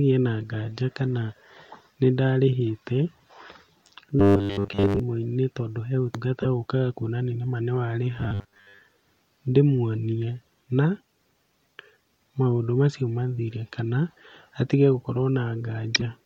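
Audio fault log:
4.20–5.00 s and 8.19–8.81 s, robotic sound from repeated short buffers: the speech turns into a rigid, metallic buzz at 100 Hz, the first ending just before "tondũ he ũtungata ũkaga". This is likely from audio arriving too slowly, with a 10 ms slice looped in place of most of the real signal.
6.42–6.46 s and 15.95–16.02 s, corrupt frame decoded: brief glitches, the first right after "tondũ he ũtungata". In each, a single damaged compressed frame was decoded anyway, so its energy lands at wrong frequencies for that frame's duration.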